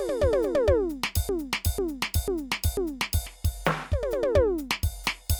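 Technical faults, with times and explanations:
1.29–3.27 s, broken-record loop: a 0.49 s slice of the music plays four times back to back, likely a stalled player resending its last fragment.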